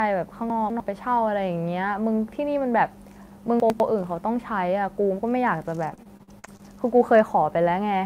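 Speech recording with two brief jumbled moments, at 0.5 to 0.8 s and 3.6 to 3.8 s, where the sound seems to stumble. These are chunks out of order: a 100 ms chunk plays late, after two chunks in the first case and after one in the second, leaving hard joins at each seam. From 5.89 to 6.61 s the sound turns choppy, with pieces missing. This is repeated packet loss (robotic sound). Short gaps follow one another, the longest about 43 ms, and each is patched by extending the preceding sound, so roughly a quarter of that stretch is filled-in audio.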